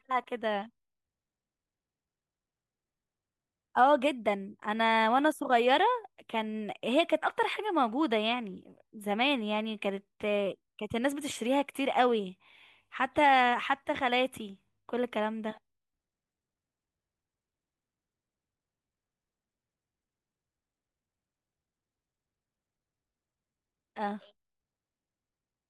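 No technical faults can be heard anywhere in this speech recording; the signal stays continuous and stable throughout.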